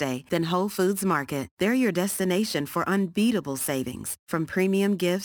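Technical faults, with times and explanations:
Throughout, crude rate conversion. A gritty, inharmonic fizz rides on the louder and brighter speech. Samples were repeated to raise the rate, with no filtering, which fits a step from 44.1 kHz to 48 kHz. The error sits about 20 dB below the speech.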